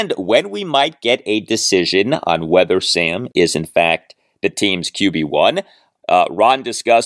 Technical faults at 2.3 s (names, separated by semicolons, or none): none